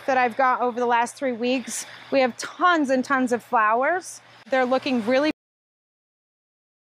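At 5.31 s there is a cut-off end: the final buffers were never written, so the sound halts mid-event and drops straight to digital silence with no decay.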